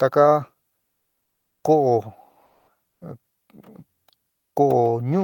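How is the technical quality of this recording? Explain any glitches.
The recording has two brief background dropouts. Comfort noise in place of the background at 0.81–1.63 s and 2.45–2.67 s: transmission likely paused, so synthetic noise replaced the real background, sounding flat, first about 12 dB quieter, then about 6 dB louder.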